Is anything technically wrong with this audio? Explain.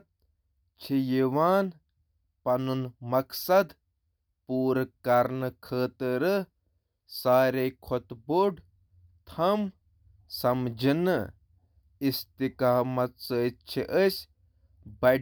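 No, nothing technically wrong here.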